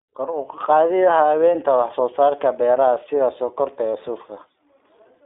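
From start to finish the speech runs through the iLBC codec, and the damage is plainly audible. Nothing gets past about 3.7 kHz, the low end thins below 300 Hz, and each 20 ms frame is coded independently, giving a rough, slightly synthetic edge that fits iLBC's 15.2 kbps mode.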